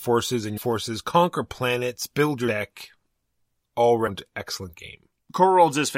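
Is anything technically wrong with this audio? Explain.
Yes. The speech jumps forward three times with a brief smeared blip: at 0.56 s, just before "conquer planets build", losing about 0.3 s; at 2.47 s, right after "conquer planets build", losing about 0.15 s; and at 4.06 s, losing about 0.2 s. These are compressed frames skipped. The decoder dropped whole frames, so each gap fits multiples of a 26.1 ms frame, and overlapping neighbours blur the joins.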